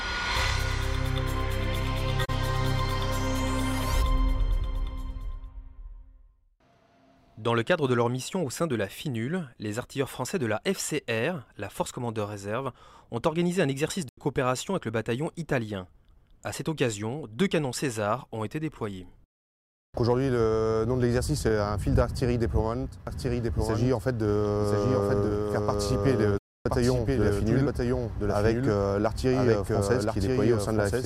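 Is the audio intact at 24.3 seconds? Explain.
No. From 23.07 s to the end, a doubled audio track is present, most likely because a second, slower capture path was mixed in. A full-band copy trails the original by about a second, a few dB quieter, with no decay or room colour.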